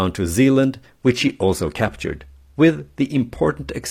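At 0.99 s the speech switches abruptly, with no gap, to an adaptive stream at a lower bitrate, and stays there until the clip ends at 3.91 s. The connection evidently slowed, so the player moved to a leaner encoding. The treble becomes thinner, with nothing above 15 kHz, and codec artefacts grow more audible. The character of the change fits a step down from roughly 96 kbit/s AAC-LC to 24 kbit/s HE-AAC.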